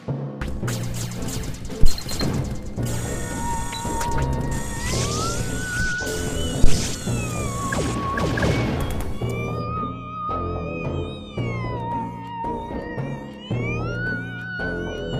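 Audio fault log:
1.83–1.90 s and 6.64–6.79 s, phantom power thump: Two deep thumps are heard. Each comes from a supply being switched on or off on a live input, sending a voltage step through the coupling capacitors. They decay in about 14 ms and 34 ms.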